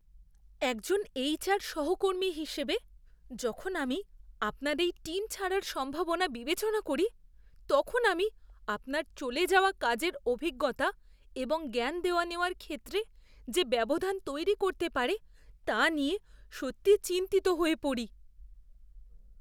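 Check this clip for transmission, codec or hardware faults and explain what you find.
No faults can be heard anywhere in the speech. There is nothing here that calls for explanation.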